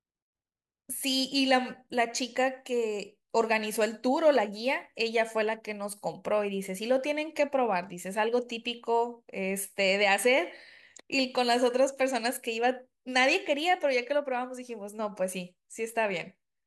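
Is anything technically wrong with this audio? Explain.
No, nothing is technically wrong with this audio.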